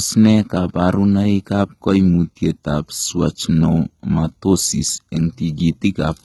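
Throughout the speech, sibilants sound gritty and lisping, with treble hard-cut at 11.8 kHz on the spectrogram: heavy HE-AAC compression, likely near 16 kbps, its band-replicated highs misaligned with lower harmonics.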